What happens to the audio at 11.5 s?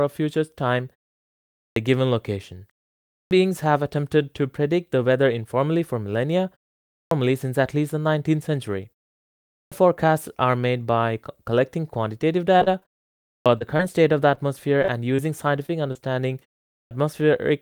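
At 11.5 s the speech plays through intact, with nothing wrong to be heard at that moment.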